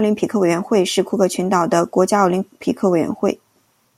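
No technical faults can be heard anywhere in the recording, so there is nothing to place on the timeline.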